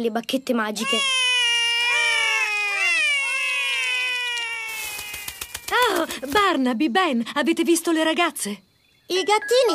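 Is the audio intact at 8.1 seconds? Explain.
Yes, at 8.1 seconds the audio is intact, with no dropout, click, distortion or other fault to be heard at that point.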